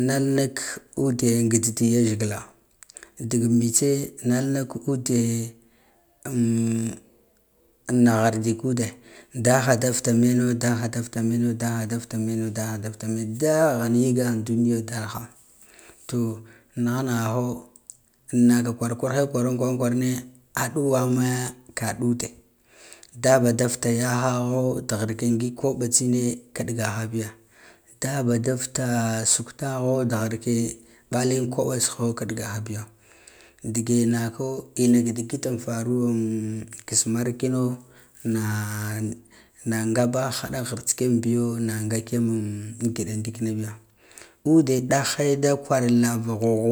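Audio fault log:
Nothing to flag here; this speech recording came through with no faults worth logging.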